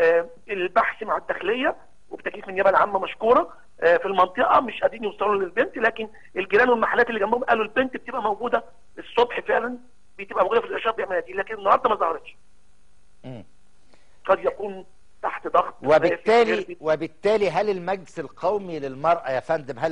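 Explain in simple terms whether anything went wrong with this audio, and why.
Nothing went wrong here: there's no glitch, dropout or other fault to hear anywhere in this recording.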